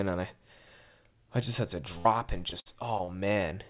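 Right after "I just had to", at 1.98 to 2.07 s, there's a burst of packet loss: about 60 ms goes missing, patched by stretching the last sound and fading it out briefly. Then from 2.50 to 3.38 s comes repeated packet loss, five short holes, the longest 58 ms, each filled in, so roughly a sixth of that stretch sounds choppy and robotic. All of it sits inside a band with nothing above 4 kHz, which points to a 64 kbps telephone-style codec on the call path.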